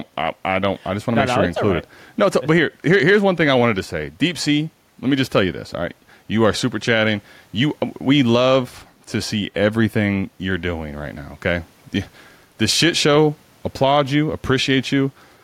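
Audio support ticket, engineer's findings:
Gain pumping, throughout the speech. Level swing around 5 dB. Dynamics squashed. Likely cause: input gain set far too high, fast limiter or compressor clamping on every peak. Room noise sits about 44 dB below speech.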